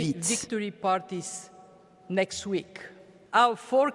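From 2.75 s to the end, the resampler restarted on every block: 50 ms blocks converted from 48 kHz to 24 kHz were each resampled in isolation, so every block edge lacks its true neighbouring samples. The result is a regular tick train at 20 Hz riding on the sound.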